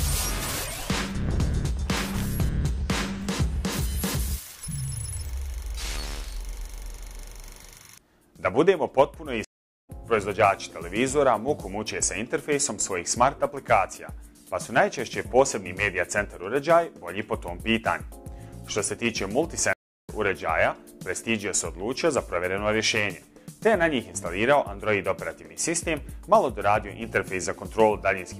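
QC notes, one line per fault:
9.45–9.90 s and 19.73–20.09 s, stream reconnect: the connection drops, leaving about 0.39 s then 0.32 s of silence. A fresh decoder restarts mid-stream with a brief fade-in, and the sound resumes later, skipping roughly 0.4 s and 0.2 s respectively.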